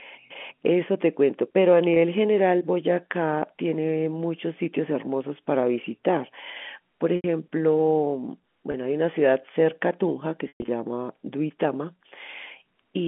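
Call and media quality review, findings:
Packet loss with pitch repetition, 1.94–1.96 s and 8.72–8.74 s: brief held, buzzy sound, about 20 ms each, consistent with single 20 ms packets dropped. Receiver concealment loops the last pitch period across the gap.

Same fault, 7.16–7.24 s: 80 ms gap bridged by the repeated period, fading toward silence.

Same fault, 10.48–10.68 s: worst event, 160 ms lost in bursts over 200 ms, longest run 120 ms. Repetition fades out and speech returns via a short cross-fade. The G.711 A-law line band, 200 Hz to 3.4 kHz, carries the concealed segments.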